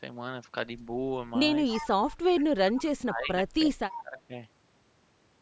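It's a speech clip with an echo leak: a faint delayed copy of the speech, about 15 to 25 dB down and trailing by 319 ms, surfaces at 1.67–1.89, 2.08–2.17, 2.40–2.44, 2.76–2.81 and 3.93–4.02 s. That's likely a far-end speakerphone whose echo canceller let some of its pickup slip back. From 2.70 to 4.34 s the main talker also gets pushed down, dipping by as much as about 20 dB for around one and a half seconds in all. That's speech suppressed in double talk, likely the canceller ducking everything while both sides overlapped.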